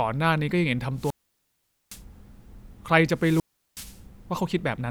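Wireless microphone squelch dropouts interrupt the speech at 0.96–2.03 s and 3.14–4.02 s. The radio link fades, hiss swells, and the receiver's squelch mutes for 0.81 s, then 0.37 s. Waveform and spectrogram show broadband noise, a flat silent gap, then returning speech.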